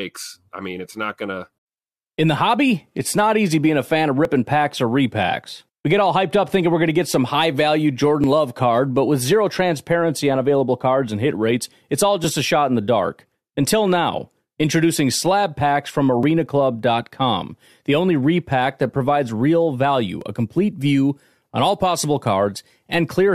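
Speech with brief cuts at 4.25, 8.24, 12.24, 16.23 and 20.21 s. Each is a tiny skip, under 20 ms. The spacing fits 4-second stream segments. This is overlap between stream segments: overlapping time stamps made the player trim real audio, so the waveform jumps.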